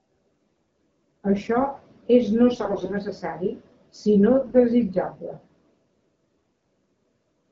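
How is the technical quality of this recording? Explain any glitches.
The recording has four brief bursts of AMR bit errors over light wideband-codec coloration whose clarity fits a mid rate near 12.65 kbit/s.

The bursts fall at 0.49–0.64 s, 2.48–2.96 s (just after "és no"), 4.38–4.60 s and 6.49–6.66 s. In each, the less protected bits of the coded frames were flipped, about a tenth in the first burst and a few percent later. The excitation pulses and the fine pitch, gain and spectral values are therefore misplaced. Pitch and level hold roughly steady, but the sound turns hoarse and gargly. On a spectrogram the harmonics smear into noisy, broken texture, and the waveform shows jagged, irregular cycles.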